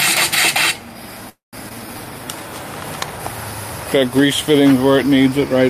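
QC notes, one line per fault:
1.29–1.55 s, call audio freeze: packets were likely held up and the jitter buffer ran dry, so the last sound was stretched into a fading fill and then 150 ms of silence. Nothing is lost, only delayed by 234 ms.
1.69–1.72 s, skip ahead: roughly a tenth of a second of waiting audio was dropped to catch up, so playback jumps forward with almost no gap.
1.75–2.48 s, jitter buffer slow-down: the buffer rebuilt its reserve by repeating short pitch periods, adding 95 ms, so the sound runs at about 88% speed, drawn out at unchanged pitch.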